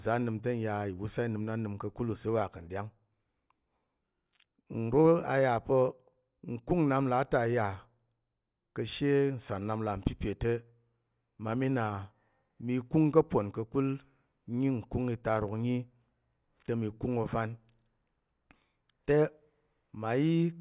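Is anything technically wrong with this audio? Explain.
No, nothing technically wrong can be heard in this speech recording. There are no faults to point to anywhere in it.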